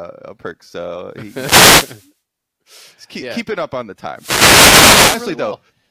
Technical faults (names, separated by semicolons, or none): wireless microphone noise hit